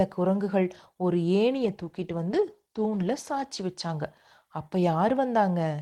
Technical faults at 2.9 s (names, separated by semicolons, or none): call bitrate drop